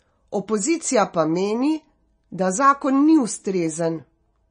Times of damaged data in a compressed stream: none

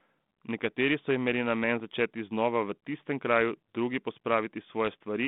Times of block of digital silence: none

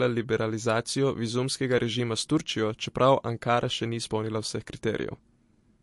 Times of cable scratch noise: none

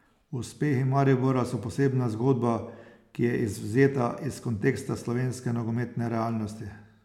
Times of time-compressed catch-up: none

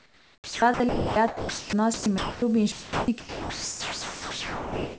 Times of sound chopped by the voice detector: 0.00-2.42, 2.72-4.99

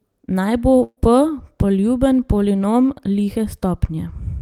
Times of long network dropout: none

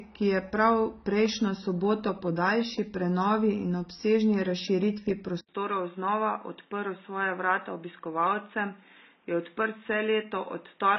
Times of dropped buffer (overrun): none

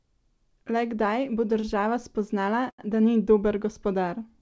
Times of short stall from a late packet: 1.60-1.65, 2.70-2.80

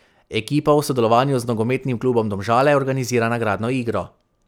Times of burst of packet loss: none

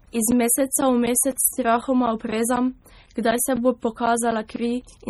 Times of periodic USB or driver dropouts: 0.06-4.82

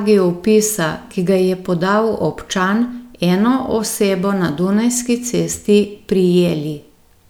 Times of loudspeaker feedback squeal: none

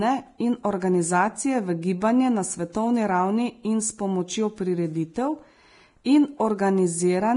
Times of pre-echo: 6.04

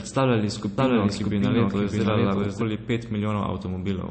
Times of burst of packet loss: none

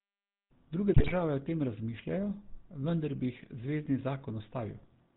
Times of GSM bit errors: 0.94-1.13

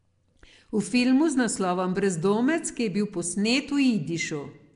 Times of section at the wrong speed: none

